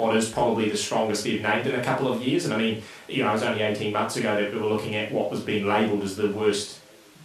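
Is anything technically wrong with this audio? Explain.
No, nothing is technically wrong with this audio.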